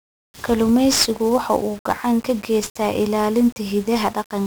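It's a speech clip, and from start to finish it carries the signature of 1-bit DFPWM compression. Each sample gets only a single bit nudging an adaptive level up or down, so the coding error turns into dense broadband noise riding on everything. The damage here is heavy: the speech sounds fuzzy and crackly throughout, and the top end is swamped by hiss. The character fits a stream running at around 48 kbps.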